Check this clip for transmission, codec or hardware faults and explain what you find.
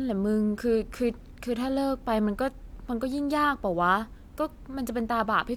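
No transmission, codec or hardware faults can be heard anywhere in this speech recording.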